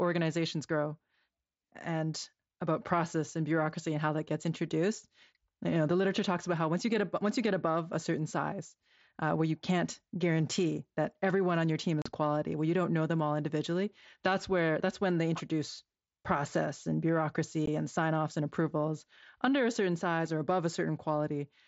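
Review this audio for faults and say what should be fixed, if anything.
Unconcealed Bluetooth headset packet loss leaves two holes in the speech: 12.02 to 12.06 s, 37.5 ms, which fits five lost mSBC frames, and 17.66 s, 15 ms. Each gap is filled with silence or an idle pattern and has abrupt edges, not the smeared or repeated sound of concealed loss. Enabling packet loss concealment on the headset link and keeping the phone closer to the headset would prevent it.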